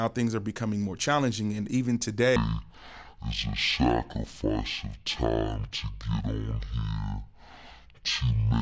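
From 2.36 s, after "more challenging and even", a wrong sample rate, fitting 32 kHz audio played at 16 kHz, halves the speed and drops the speech an octave.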